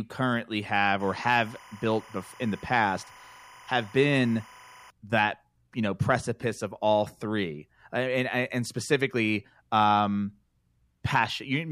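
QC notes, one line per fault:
1.0–4.9 s, timecode bleed: linear timecode leaks in from a neighbouring line, a square wave flipping between pitches near 1 and 2 kHz at 25 frames per second, about 25 dB under the speech. Its rhythmic two-pitch chirping warble sets it apart from a steady whine or mains hum.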